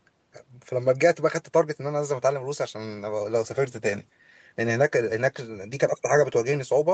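No technical faults heard.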